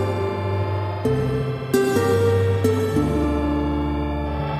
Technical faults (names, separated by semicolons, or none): audio read two samples at a time (double speed)